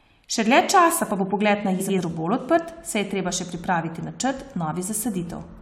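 Speech, with frames out of order from 1.79 to 1.99 s, right after "pa bo pogled na": two adjacent blocks of about 93 ms play swapped, giving garbled flutter. Unlike a dropout, no time goes missing.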